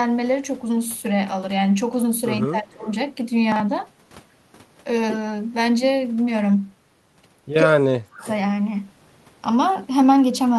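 From 2.42 to 2.87 s the speech sinks sharply, by something like 20 dB at its lowest. This is likely speech suppressed in double talk: with both ends talking at once, the echo canceller could not tell this talker apart from its own loudspeaker echo and turned everything down together.

Overlapping the tail of that dip, from 2.81 to 2.95 s, a faint copy of the voice trails about 220 ms behind, sitting well below the main speech. This is likely an echo leak. The far end is playing the call over a loudspeaker, and its echo canceller let part of what its microphone caught slip back down the line.

At 3.52 to 3.60 s there is a brief jumbled moment. Here chunks play out of order: a 40 ms piece of audio landed one chunk late and plays after the piece that should follow it. Nothing is missing, but the swapped order leaves three hard joins.

The same pattern returns more heavily from 7.63 to 8.26 s. 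The speech is pushed down much further, by roughly 40 dB at its deepest, likely again speech suppressed in double talk. From 8.22 to 8.31 s the faint 220 ms-delayed echo slips through once more, likely another echo leak from the loudspeaker end.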